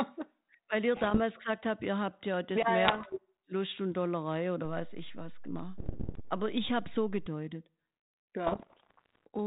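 Bit errors on an ADPCM link break up the speech from 0.97 to 1.19 s, just before "gesagt habt ihr habt", and again from 2.84 to 3.14 s. Flipped bits throw the decoder's step size and predictor off track. Each error rings on briefly as pops and rough bursts, with short level jumps.

At 4.65 s a DC step shifts the waveform's zero line. It is heard as a low thump while the speech carries on unchanged. The offset lasts until 7.26 s.

Inside that span, from 5.78 to 6.20 s, the bit errors return at roughly twice the earlier rate, so the bursts come thicker. They come back from 8.46 to 9.27 s in the longest run. The narrow telephone band of the link fits 32 kbit/s G.726.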